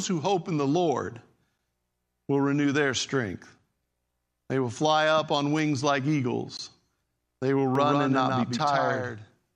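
A speech clip that picks up a doubled audio track from 7.75 s to the end: a second full-band copy trails by around 150 ms, roughly 5 dB quieter, kicking in abruptly with no decay or room colour. The likely cause is a slower capture path recording the signal a second time.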